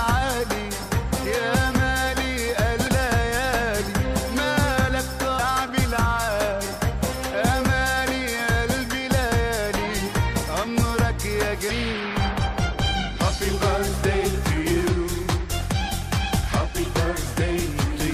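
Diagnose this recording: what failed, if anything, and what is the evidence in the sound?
The failure is at the codec stage: damaged data in the compressed stream. Brief glitches at 2.87–2.89 s, 5.38 s and 11.69 s are where the decoder misread corrupted frames and lost sync.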